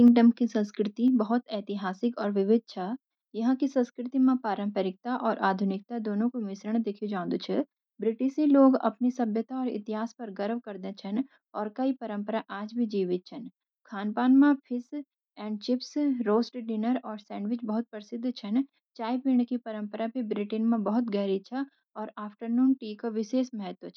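From 0.06 to 0.08 s, peaks hit the converter's limit with flattened tops, roughly 7 percent of samples, giving a harsh crackle, likely microphone overload from excessive input gain.

At 0.08 s, voice and background drop together by about 2 dB in a single step, likely the microphone volume stepped down by call software reacting to that clipping.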